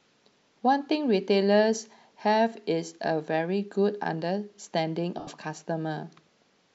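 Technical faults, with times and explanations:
5.19–5.27 s, lost LE Audio frames: an 80 ms noisy smear that fades away, as the LC3 decoder fills the gap by repeating the last spectrum with random signs.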